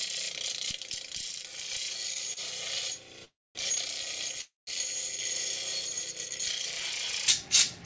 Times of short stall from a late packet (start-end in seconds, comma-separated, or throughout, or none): 2.33-2.39